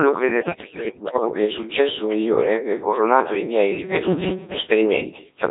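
Robotic, buzzy speech runs through the whole clip, with a synthetic, sine-built quality and smeared detail. That is the Codec 2 vocoder at heavy damage. Instead of keeping the waveform, it transmits only pitch, voicing, energy and a coarse spectral envelope, then resynthesises the voice at the decoder, which fits its 1.3 kbit/s mode. From 0.41 to 1.34 s, just before "il successo migliore ebbe", the voice lurches in pitch, loudness and tone colour and dissolves into warbles and bleeping gibberish. These are bit errors on digital voice radio. With corrupted bits at a rate around one in ten, and the damage pointing to roughly twenty-odd frames hit, each flipped bit wrongly sets the pitch, level, voicing or spectrum for an entire frame of synthesised sound. From 3.75 to 4.63 s, right after "ebbe coronato i miei", the speech turns into a rigid metallic buzz at 188 Hz that only loosely tracks the words. 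This is robotic sound from repeated short buffers, likely caused by audio arriving too seldom. A stretch of about 5.3 ms keeps being replayed to fill the gaps while much of the real audio, very roughly two thirds of it, is skipped. That repetition imposes the fixed buzz pitch.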